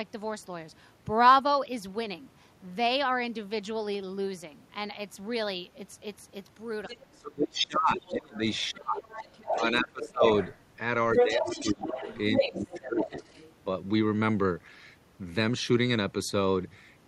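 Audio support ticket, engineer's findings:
Other side's voice leaking through at 6.86–7.17 s, 8.02–10.58 s and 11.16–13.53 s, rising from about 20 dB to about 5 dB below the talker. Likely residual loudspeaker echo the canceller missed.

Speech suppressed in double talk at 7.1–10.24 s and 11.21–13.24 s. Talker's level drops by up to about 30 dB and 20 dB while both sides speak. Likely the canceller attenuating talker and echo together.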